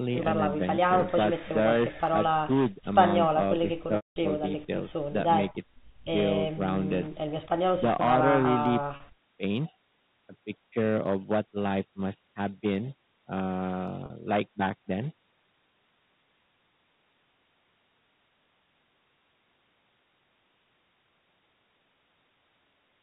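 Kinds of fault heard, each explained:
Hard clipping: The speech runs about 10 dB hotter than the chain can pass, so the loudest peaks, a small share of the signal, are sliced flat throughout the clip. Those squared tops add a gritty crackle on peaks. Unlike codec quantisation hiss, which follows the level smoothly, this harshness appears only on peaks.
Packet loss with pitch repetition: At 0.76, 3.96, 8.96 and 14.06 s, audio goes missing and the receiver fills the gap by repeating the last pitch cycle. The 20 ms and two 40 ms losses sound like a brief, buzzy held tone. The 200 ms loss at 3.96 s fades from that buzz into silence before the speech cross-fades back. Unlike a plain dropout, these gaps carry a tonal echo of the preceding sound.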